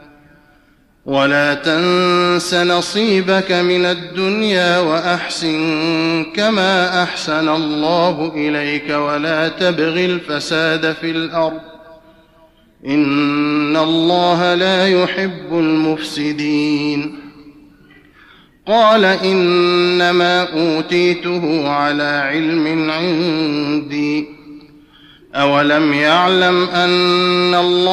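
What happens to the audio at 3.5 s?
Nothing goes wrong at 3.5 s: the audio runs through that point intact, with no dropout, glitch or distortion.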